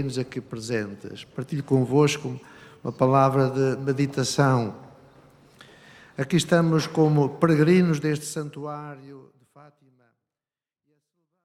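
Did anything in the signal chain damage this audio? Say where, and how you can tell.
No, nothing damaged it; the end fades out smoothly.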